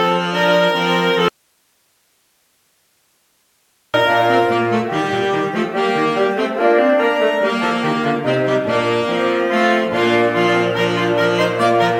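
At 1.29 s the sound cuts out abruptly and stays gone until 3.94 s, an audio dropout to a faint residue lasting about 2.65 s. The gap holds only hiss, roughly 45 dB below the signal, so the wanted feed was likely lost while the downstream path stayed live.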